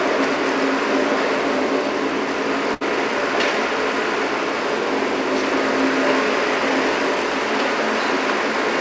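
From 2.74 to 2.83 s the sound hangs with a faint buzz or dip, a short stall from a late packet: the emptied jitter buffer stretched 69 ms, losing nothing.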